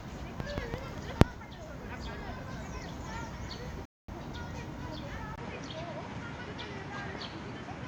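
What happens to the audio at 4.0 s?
A rebuffering stall is under way: the player used up the audio it had downloaded and halted playback until more data came in. From 3.85 s to 4.08 s the sound drops out to silence, and when playback picks up again it continues from exactly the point where it stopped. Nothing is skipped or repeated; the only effect is a gap of about 230 ms inserted into the timeline, stretching the clip by that amount.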